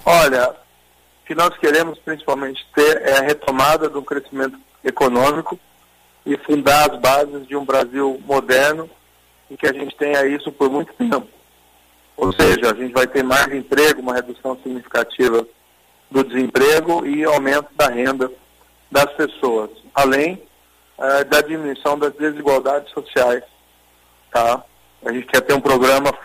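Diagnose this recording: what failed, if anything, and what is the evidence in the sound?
Between 12.25 and 12.55 s the sound turns into a stiff, metallic buzz pitched at about 94 Hz, which is robotic sound from repeated short buffers. That pitch fits a repeat cycle of roughly 10.7 ms, so a tiny slice of audio is being looped in place of fresh input for most of that stretch. The likely culprit is the driver or buffer stage: new data stopped arriving in time, and the software padded the gap by replaying the last chunk while the real audio was dropped.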